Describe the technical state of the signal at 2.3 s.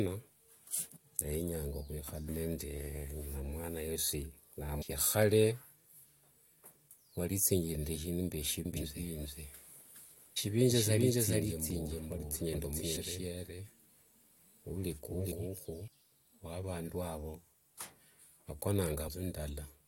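At 2.28 s, compressed frames were skipped: about five frames, roughly a tenth of a second of audio, went missing or were rejected by the decoder as damaged. The speech jumps ahead by that amount at the join.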